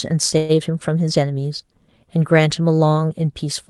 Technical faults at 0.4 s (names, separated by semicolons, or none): call audio freeze